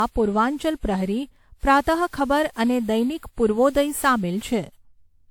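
Throughout the speech, generation loss gives a swirly, hollow smear and blurred attacks, worse than the bandwidth reaching up to 20.1 kHz suggests. A single low-bitrate encode would lose that top band instead; this likely comes from around ten successive WMA passes at about 128 kbit/s.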